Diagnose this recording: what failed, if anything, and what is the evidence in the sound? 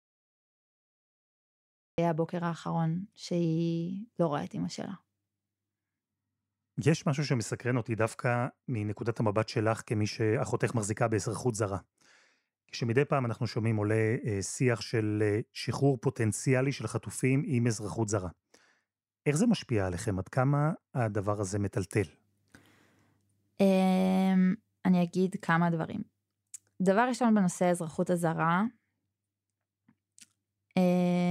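The capture started late, a cut-off start at the recording or storage stage. The first 1.98 s are pure digital silence, and then at 1.98 s the speech cuts straight in partway through a sound, with no natural onset or fade-in leading up to it. That hard edge is the giveaway: the recorder or stream wasn't actually writing audio until after the talker had already begun, so the front of that first sound is simply missing.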